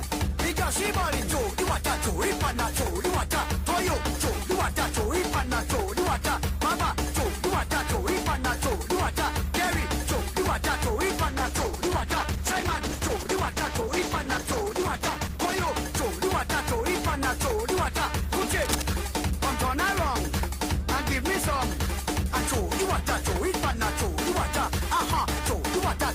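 From 11.28 to 15.73 s there's a call bitrate drop. The sound goes rough and watery, with the top end cut off, which fits the encoder being squeezed from about 32 kbps down to about 11 kbps, where it sits for roughly 4.4 s before recovering.

Then, between 18.62 and 18.83 s, there's a short burst of cable scratch noise: dense, uneven scratching sitting only a little below the sound's own level. It's likely a worn cable or connector being moved, with its contact resistance jumping around for that fifth of a second.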